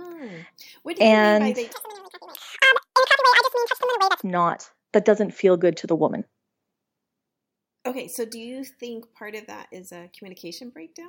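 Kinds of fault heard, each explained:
Audio read two samples at a time (double speed): from 1.73 to 4.23 s the speech is played back at 2x, running twice as fast and an octave higher, as if the reader treated each pair of mono samples as one frame of a two-channel or double-width stream. On a spectrogram, harmonics and formants in that span sit at double their normal frequencies and syllable patterns are compressed in time; the waveform shows tighter cycles and shorter bursts.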